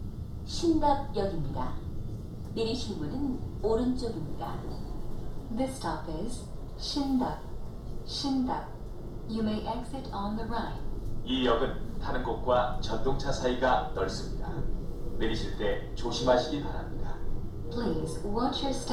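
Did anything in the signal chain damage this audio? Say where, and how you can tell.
No, nothing in this recording stood out on listening as damage from any stage of the signal chain.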